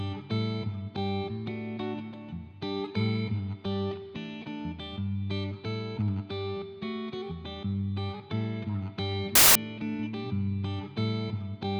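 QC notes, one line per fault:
9.35–9.55 s, samples built from the wrong bytes: for 0.2 s the reader assembles each sample from misaligned or swapped bytes, so the rapidly changing low-order bits land in the most significant position, turning the sound into a sudden burst of loud, harsh broadband noise.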